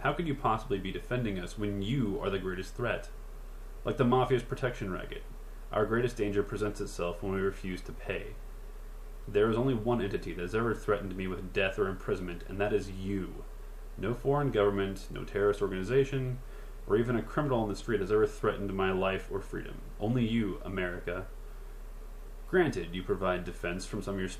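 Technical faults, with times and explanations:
No technical faults detected.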